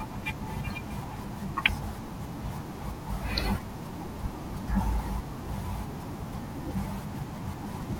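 At 1.69 to 1.71 s a single loud pop lands on top of the speech, which carries on underneath without a break. It sounds like a sharp thump, a few decibels louder than the voice. A sudden voltage step or pulse, likely from a plug, switch, static discharge or driver glitch, entered the signal path. On the waveform it is a tall, narrow spike standing clear of the speech envelope. On a spectrogram it is a thin vertical stripe spanning the whole frequency range.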